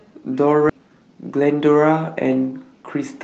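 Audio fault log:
0.69 to 0.71 s, skip ahead: the audio jumps forward with no gap at all, and roughly 0.7 s of speech just vanishes. A stretch was dropped while later audio was already queued, so both sides of the cut butt straight together.
0.79 to 2.16 s, jitter buffer speed-up: right after the jump the speech runs at about 112% of normal speed with the pitch unchanged, so it sounds a bit rushed. The buffer was trimming tiny pitch-period slices over and over, shaving off roughly 150 ms.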